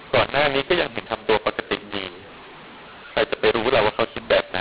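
A mu-law and A-law mix-up runs through the whole speech clip: telephone audio encoded with A-law is being decoded as if it were mu-law. Because the two logarithmic curves assign different levels to the same 8-bit codes, sample values come back distorted, some too loud and others too quiet. The speech sounds harsh and gritty, quiet passages are raised well above silence, and the pauses fill with hiss. The 4 kHz telephone band itself remains intact.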